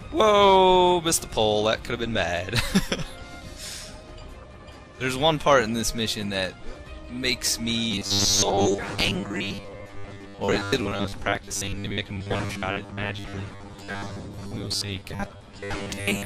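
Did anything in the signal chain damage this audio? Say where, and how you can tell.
Yes. From 7.91 s to the end at 16.25 s, robotic sound from repeated short buffers sets in: a rigid 100 Hz buzz, likely from a driver or buffer stage repeating 10 ms blocks about half the time. Unlike mains hum, it follows the sound roughly while audio goes missing.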